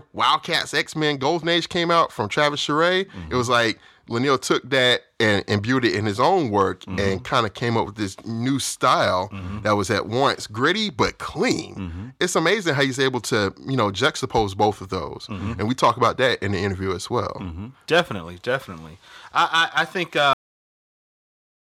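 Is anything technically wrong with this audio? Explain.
Yes, there's a cut-off end. At about 20.33 s, right after "I think", the speech just stops mid-sound and drops straight to digital silence, which holds for the last second and a half or so. What's happening is that the final stretch of audio never made it out: the last buffers weren't written or played, so instead of the sound finishing and decaying naturally, it's chopped off dead with nothing trailing behind it.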